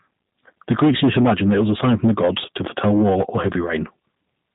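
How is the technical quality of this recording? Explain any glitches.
The speech sounds thin, slightly rough and synthetic from start to finish, with nothing above about 3.8 kHz. That points to G.729 coding at 8 kbit/s. Each 10 ms frame is rebuilt from a vocal tract filter, a pitch predictor and a few pulses, so the codec damage is plainly audible throughout.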